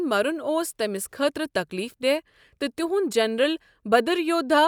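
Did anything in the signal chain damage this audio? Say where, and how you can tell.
No, nothing damaged this audio.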